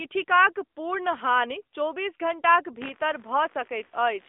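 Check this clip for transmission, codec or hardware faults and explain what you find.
Three faults are present: narrowband mobile coding throughout, computer activity noise late in the clip, and a brief dropout from lost speech frames.

AMR narrowband mobile codec, throughout: the narrowband sampling and line filtering confine speech to 300 Hz–3.6 kHz, and its buzzy, synthetic colouring fits a mid-rate mode near 10 kbps.

Computer activity noise, from 2.82 s after "पूर्ण हानि चौबीस घण्टाक" to the end: computer load disturbs the audio ground, adding a pulsing buzz around 70 Hz, about 25 dB below the speech.

Lost AMR speech frames, 3.86 to 3.93 s: the decoder repeats the last good settings at fading gain for 40 ms, consistent with two lost frames, producing a brief smeared dip.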